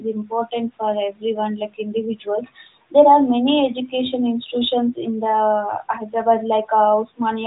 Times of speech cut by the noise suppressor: 0.00-0.31

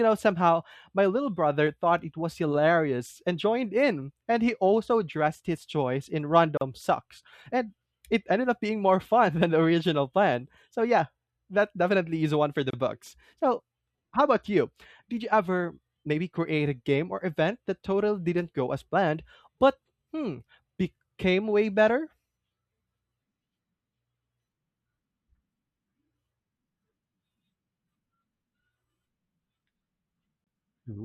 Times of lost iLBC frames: none

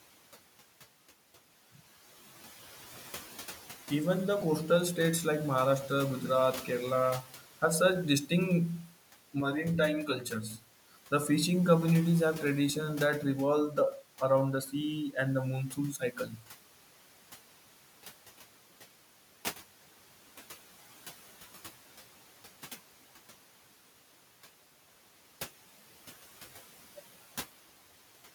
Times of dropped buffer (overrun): 1.54, 4.42, 12.70

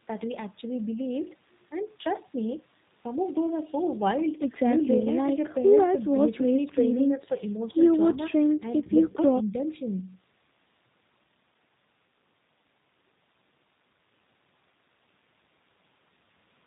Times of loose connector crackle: none

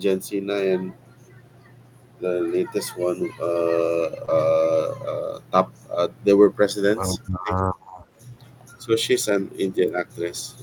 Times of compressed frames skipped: none

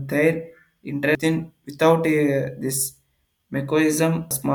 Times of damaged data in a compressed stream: 1.15, 4.31

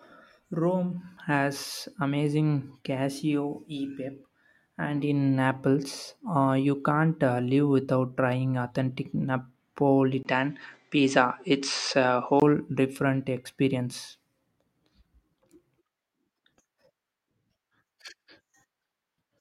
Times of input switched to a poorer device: 10.23-12.42

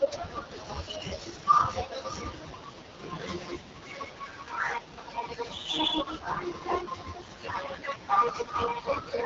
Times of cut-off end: none

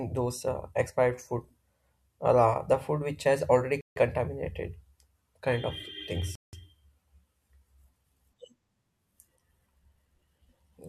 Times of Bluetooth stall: 3.81-3.96, 6.35-6.53

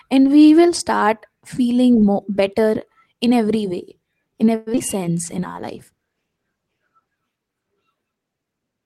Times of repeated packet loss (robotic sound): 4.55-4.82

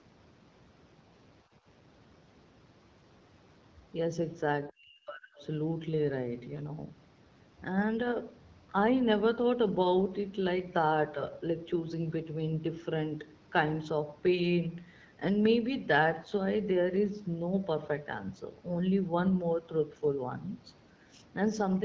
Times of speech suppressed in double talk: 4.68-5.42

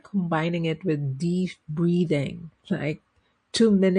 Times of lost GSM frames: none

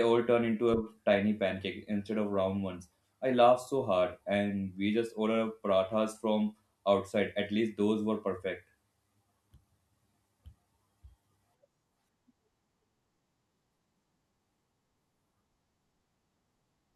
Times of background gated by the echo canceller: none

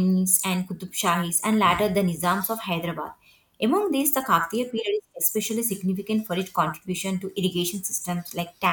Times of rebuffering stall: none

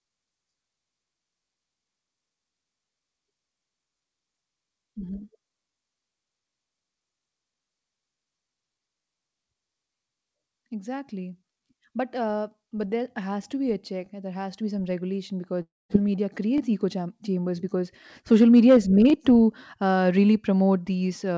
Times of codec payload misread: none

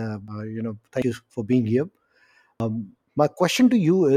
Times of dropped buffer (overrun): 0.28, 1.02, 2.60

